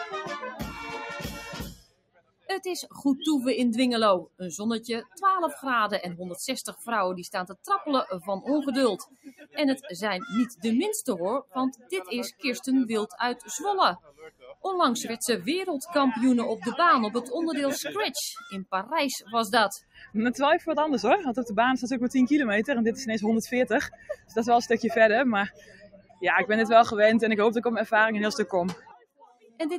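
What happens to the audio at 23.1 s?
At 23.1 s the sound is still under the noise suppressor applied to music or sounds, which runs through the whole clip. A speech-oriented suppressor treats sustained tones, ambience and reverb as noise, so it lets attacks pass and then pulls down what is held. Around 23.1 s the level swings by roughly 10 dB, with tails sinking after each onset, so the sound pumps and flutters and comes across thinned out.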